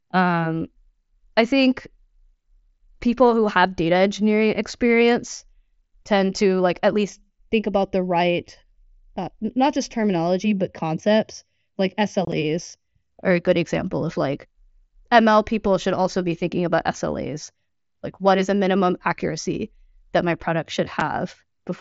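A speech clip, carried over a wideband Bluetooth headset link whose mSBC coding keeps the audio below 8 kHz. From 7.10 to 13.10 s, between "tend to like at" and "are a good example", channel delay (comb filtering) makes the sound hollow and phasey. One channel arrives a fraction of a millisecond late, and summing to mono cancels evenly spaced frequencies, the first around 1.5 kHz. A spectrogram shows fixed dark horizontal stripes for those six seconds. Unconcealed Bluetooth headset packet loss leaves abrupt holes where packets vanished and nothing filled them. From 12.25 to 12.33 s, 30 ms goes missing in scattered gaps across 75 ms, the longest 22.5 ms. At 21.00 s, after "accuracy that my product", one 7.5 ms gap follows. The waveform shows flat-line dropouts with sharp edges, and the spectrogram shows thin vertical blank slices.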